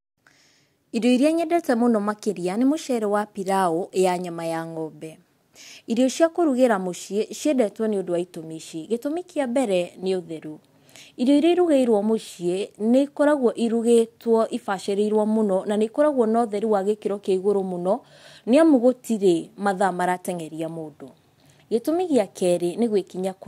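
Nothing in this speech recording stands out as a technical problem, with no fault to point to anywhere along its length.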